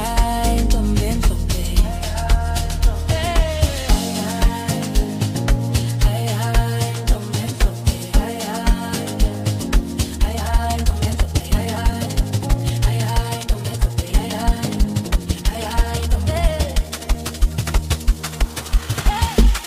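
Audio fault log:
10.11–19.67 s: time-stretched section. From 10.11 s to the end, the pace jumps abruptly to 1.62 times normal while the pitch stays the same. The sound turns rushed. Software likely squeezed this part to fit a length, dropping short pieces to keep the pitch.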